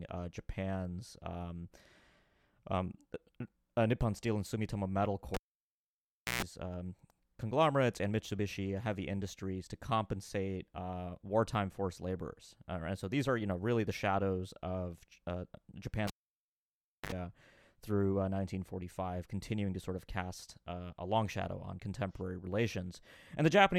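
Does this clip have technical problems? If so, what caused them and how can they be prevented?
Yes, a cable pulled and plugged in at 5.34–6.43 s (before "um conglomerates and") and 16.07–17.12 s: a pop, about 1 s of near silence, then a brief 60 Hz hum (130 ms) in the first and a brief 50 Hz hum (60 ms) in the second as the plug tip touched, then another pop. The end pops and the hum set this apart from a plain dropout. Mute the channel before re-patching, and secure the cables.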